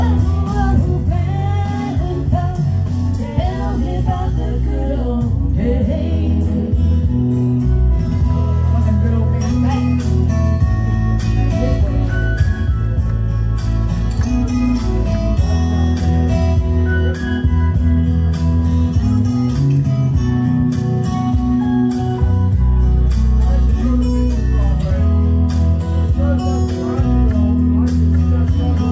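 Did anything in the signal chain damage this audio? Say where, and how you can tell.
No, nothing in the signal chain damaged this audio; the call path's codec, which fits G.722, simply leaves nothing above 8 kHz.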